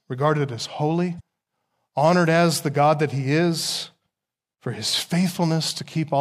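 A brief glitch cuts into the speech from 1.17 to 1.21 s, caused by damaged data in the compressed stream that the decoder misreads while losing sync.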